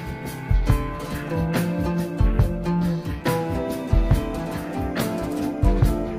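From 3.26 s to the end of the clip, timecode bleed sits behind the sound: a steady chirping warble that alternates between two pitches around 1 and 2 kHz, well down in level, roughly 35 dB below the programme. Linear timecode running at 25 frames per second has leaked in from an adjacent track or cable, and its square-wave code, flipping between those two frequencies, is being picked up as audible tone.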